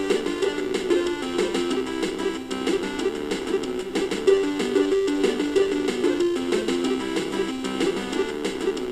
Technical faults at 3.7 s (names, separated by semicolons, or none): none